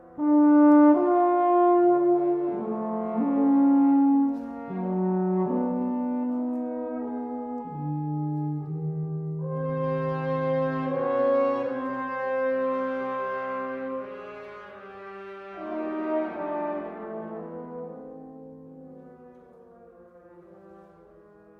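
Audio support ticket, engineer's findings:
Nothing to flag on this one; listened all the way through and didn't catch any audible problem worth raising in the ticket.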